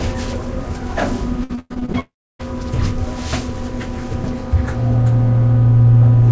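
From 1.44 to 1.96 s there is repeated packet loss (robotic sound): seven short holes, the longest 107 ms, are each bridged by stretching the preceding audio. About half the span is synthetic fill, so the sound turns choppy, with fragments missing.

At 2.00 s the audio stops for about 0.4 s and resumes at 2.41 s, with the lost portion gone. A brief smeared continuation fades, then roughly 300 ms of silence follows, which points to a likely long network dropout. The G.722 call path, with nothing above 8 kHz, carries the signal either side.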